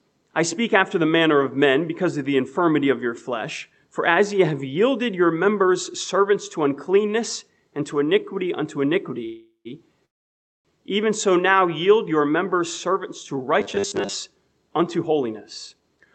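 At 9.25 s there is a call audio freeze lasting about 0.4 s. The last sound carries on as a fading buzz, then about 0.11 s of silence. Packets were likely delayed, emptying the jitter buffer. Nothing is lost. The sound resumes where it stopped.

A second freeze runs from 10.05 to 10.67 s. It lasts 0.6 s, almost all of it silent, and has the same likely cause. The audio then continues, now 0.6 s later than before.

From 13.61 to 14.15 s the sound turns robotic. A rigid, metallic buzz at 100 Hz sits over it, which fits a repeated 10 ms buffer. Audio likely arrived too seldom, so about half of this stretch is repeats.

From 14.41 to 16.07 s the jitter buffer speeds up. It trims short pitch-period pieces, about 150 ms in total, to cut the built-up delay. The sound runs 8% fast at unchanged pitch and feels hurried. Throughout, the Opus call path limits the sound to about 8 kHz.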